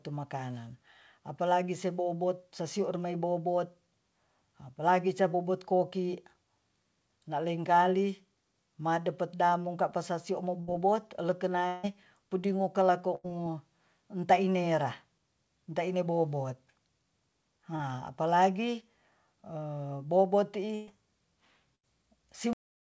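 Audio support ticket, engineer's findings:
Burst of packet loss, four events: 10.60–10.70 s, 13.15–13.27 s, 20.75–20.90 s, 21.75–21.86 s. Consecutive packets lost or arriving past the jitter buffer deadline, about 80 ms missing each, 120 ms at 20.75 s. Decoder extends the last segment and attenuates it. Held buzz or fading hiss, then a jump forward with that audio gone. Points to network jitter or congestion on the G.722 path.

Long network dropout, 11.67–11.86 s. Likely cause is a stall in the incoming stream lasting about 160 ms. Concealment runs the whole span, with no fall to silence, so the last sound drags on as a decaying buzz or hiss before speech resumes further on. The stretch under it is lost.

Short concealed packet loss, 17.76–17.82 s. Roughly 40 ms failed to reach the decoder in time. Gap filled from the preceding signal, pitch-continued if voiced, shaped noise if not, then cross-faded back into the real audio. 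Brief smear or wobble; a short consonant there may drop out.

Cut-off end at 22.53 s. Final buffers never written or played out. Speech stops mid-sound with no decay, straight to digital silence, possibly with a click at the edge. Check teardown or recording stop logic flushing before the last frames land.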